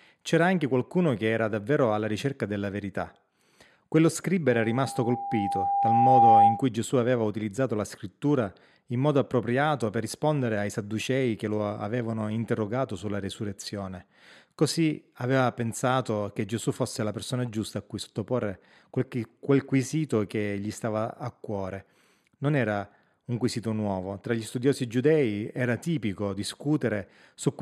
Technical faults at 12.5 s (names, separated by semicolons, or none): none